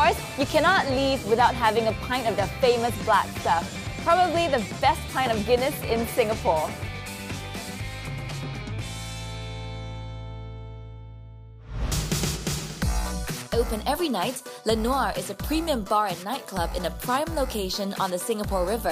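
No technical faults are audible.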